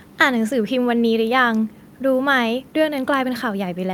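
No faults can be heard anywhere in the speech recording.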